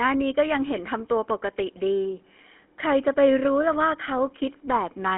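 GSM full-rate codec damage runs throughout: speech rebuilt from a vocal-tract model and sparse pulses sounds plainly buzzy and gravelly, confined to 250 Hz–3.4 kHz.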